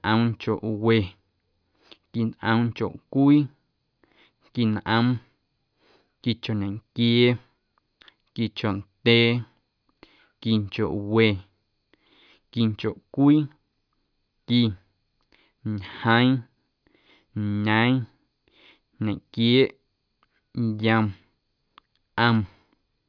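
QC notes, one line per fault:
No technical faults are audible; the signal stays continuous and stable throughout the recording.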